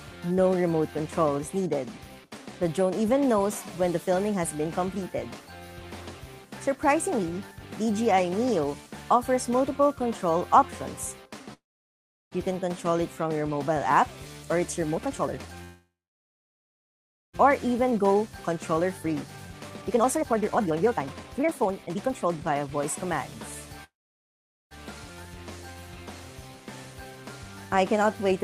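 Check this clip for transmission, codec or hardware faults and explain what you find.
Two related transmission faults recur: call audio freezes and jitter buffer speed-ups.

Call audio freeze at 11.53–12.34 s, 15.64–17.35 s and 23.84–24.73 s: the audio stops, with a brief fading tail and then near-silence, likely because delayed packets emptied the jitter buffer. Playback then resumes where it left off.

Jitter buffer speed-up at 14.95–15.64 s, 17.67–23.17 s and 27.74–28.44 s: the receiver trims pitch-period slices to shed accumulated delay, so the sound runs faster at unchanged pitch. It runs at 172%, 134% and 104% speed, removing about half a second, about two seconds and a few hundredths of a second.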